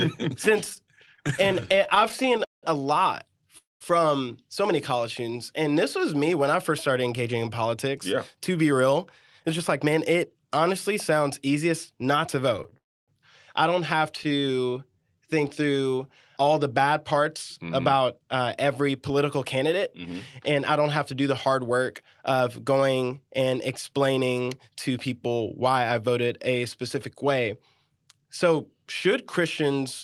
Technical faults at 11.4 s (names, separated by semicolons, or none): none